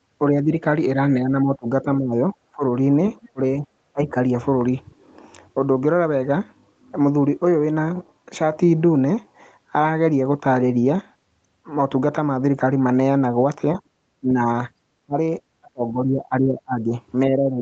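A speech clip, and the talker keeps getting ducked, most likely speech suppressed in double talk, where the echo canceller couldn't separate near and far voices and pulled both down. It dips by around 10 dB at 0.32–0.56 s, then by around 25 dB in chunks across 1.24–2.63 s, 3.29–4.16 s, and from 13.75 s right to the end. Just before that 3.29 s dip, at 3.23–3.29 s, there's a faint scrap of a second voice, roughly 30 dB under the talker, likely the other side's voice leaking through past the echo canceller. The top end stops near 8 kHz, consistent with the Opus call path at about 32 kbps.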